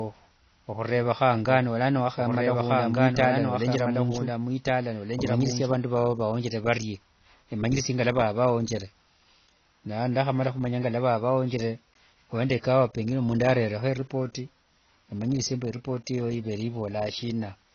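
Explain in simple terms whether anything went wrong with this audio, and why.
Doubled audio track, from 1.49 to 5.79 seconds: a second copy of the speech plays underneath the first, trailing about a second and a half behind and somewhat quieter. The echo has no fading tail or room sound, and it starts and stops abruptly, ending just before "vao vawonjere varie". This is likely from the same audio being captured twice, once through a slower route, or from an edit that left two misaligned copies.

AAC compression, throughout the whole recording: the speech sounds dull and muffled, with nothing at all above about 6.6 kHz, so the crisp top end of consonants like s and t is missing. Words also carry a plainly audible watery, fizzy texture. The likely cause is squeezing the audio hard with the AAC format, which cuts off high sounds and discards detail it judges less noticeable, leaving these audible side effects.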